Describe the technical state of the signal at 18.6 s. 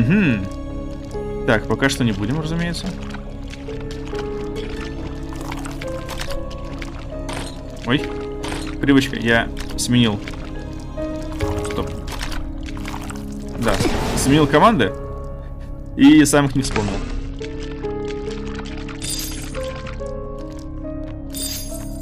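At 18.6 s the signal is inside a Bluetooth SBC bit pool drop running from 16.62 to 20.35 s. Link congestion forced the encoder's allocation far down, which fits a bit pool cut from around 31 to 11 and roughly 83 kbps. The highest sub-bands are starved and the rest coarsely quantised, so the treble turns dull and a gritty noise sits under the sound until the rate recovers.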